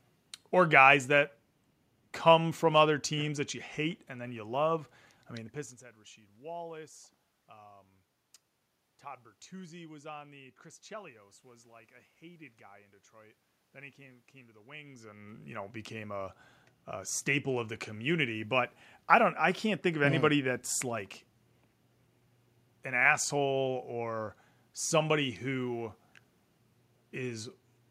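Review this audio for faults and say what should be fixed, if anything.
Nothing needs fixing; no system faults are audible here.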